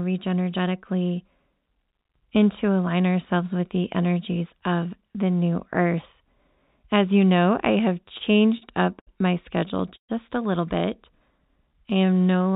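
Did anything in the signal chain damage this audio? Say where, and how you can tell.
Yes, at the network and jitter buffer stage of the call.

Repeated stalls (stutter) at 8.04–8.63 s (six brief holds, longest 39 ms) and 9.69–10.11 s (four holds, one 128 ms): late packets emptied the buffer, so sound was repeatedly stretched.

A short stall from a late packet at 8.99–9.09 s: one packet arrived late, the receiver held the last sound for about 72 ms, then resumed without loss.

A jitter buffer slow-down at 11.03–12.55 s: audio runs at 91% speed, same pitch, as repeated pitch periods add 138 ms to rebuild the reserve. The band-limited sound with nothing above 4 kHz fits the G.711 call codec.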